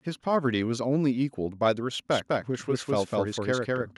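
From 2.12 s to the end, a doubled audio track kicks in: a dry, equally loud copy trailing about a fifth of a second behind, likely from a second, slower capture path.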